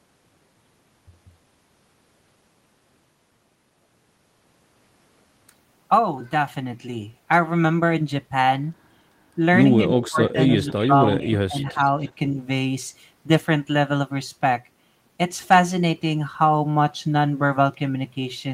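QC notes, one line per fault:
10.01–12.12 s, echo leak: a delayed copy of the speech comes back about 290 ms behind the original, sitting around 15 dB below it, so it reads as a faint repeat rather than a room reflection. The likely cause is a far end playing the call over a loudspeaker whose echo canceller failed to remove everything its microphone picked up, so that residue was transmitted back.
10.09–10.39 s and 10.74–11.79 s, speech suppressed in double talk: during the echo stretch the speech itself dips and breaks up in pieces, briefly in the first span and for roughly half a second in total across the second. The deepest dips reach around 25 dB in the first and 15 dB in the second. This is likely an echo canceller that could not tell its own talker from the returning echo while both overlapped, and turned everything down together.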